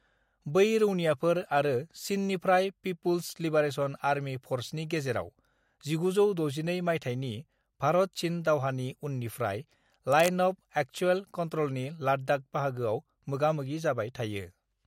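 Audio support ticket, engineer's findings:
Likely a worn cable, connector or DC-carrying control being moved; contact resistance jumping rapidly. Cable scratch noise at 10.12–10.34 s: dense, uneven burst of scratching and rustling laid over the speech, around 10 dB below it.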